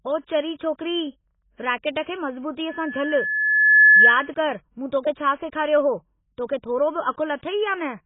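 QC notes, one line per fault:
throughout AAC compression: speech is dull and smeared, with heavy coding damage and nothing above 3.8 kHz. The likely cause is AAC-LC at a very low bitrate, around 16 kbps, where the encoder lowers its cut-off and quantises the remaining spectrum coarsely.
2.69–4.31 s loudspeaker feedback squeal: a single 1.7 kHz tone swells over roughly a second to about 15 dB above the speech, then stops. The microphone is picking up its own loudspeaker, and loop gain exceeds unity at that frequency until the loop is broken.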